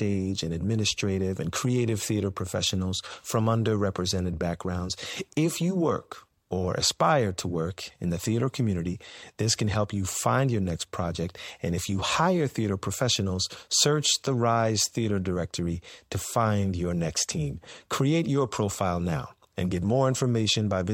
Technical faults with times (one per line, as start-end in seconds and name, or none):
none